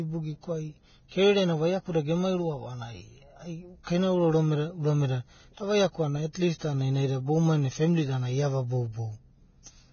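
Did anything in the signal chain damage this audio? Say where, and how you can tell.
Yes: likely heavy Vorbis compression at the codec stage, which fits a bitrate near 17 kbps. Nothing remains above 6.6 kHz throughout, and the coarsely quantised treble turns into grainy hiss.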